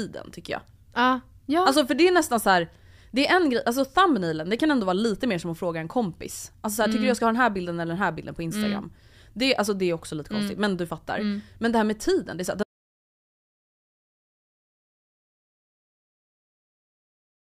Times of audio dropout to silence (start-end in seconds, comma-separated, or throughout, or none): 12.63-17.51